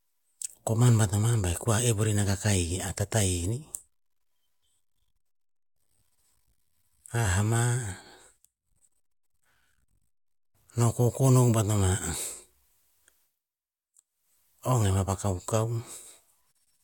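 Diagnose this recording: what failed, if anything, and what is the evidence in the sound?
Nothing stood out on listening to the speech: no stage of the chain, from capture through to playback, left anything audible that points to a failure.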